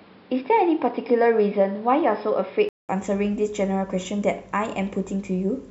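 Speech, and for the first 2.89 s or so it sounds narrow and a bit boxy, with nothing above about 5.3 kHz and a noise floor sitting roughly 30 dB under the voice. Then there's a gap of about 200 ms and the top end opens back up, with no real jump in level. That pattern points to an input switched to a poorer device, likely a headset call profile or a second mic, before the system moved back to the better input.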